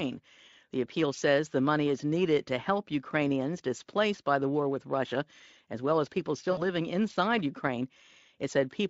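At 6.51 s, VoIP packet loss concealment takes over for about 60 ms, which fits three lost 20 ms frames. The speech decoder repeats its last pitch and filter at falling gain, so the sound smears into a fading buzzy tone or coloured noise, seen as flat, decaying bands and a shrinking waveform until 6.66 s.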